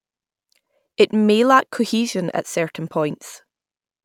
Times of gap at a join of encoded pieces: none

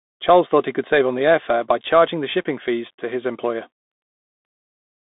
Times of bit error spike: none

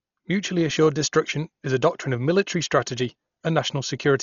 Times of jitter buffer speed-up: none

